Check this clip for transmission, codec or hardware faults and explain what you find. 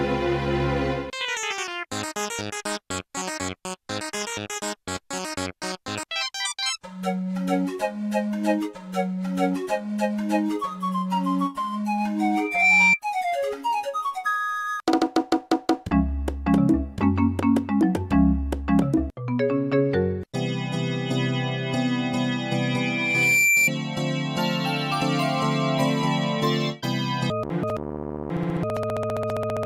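One hardware fault is present: loudspeaker feedback squeal, from 12.34 to 13.00 s and from 22.53 to 23.70 s. A microphone hears its own loudspeaker, and at 2.4 kHz the loop gain exceeds one. The first tone swells quickly to stand clearly above the sound. The second builds over about a second and is somewhat quieter.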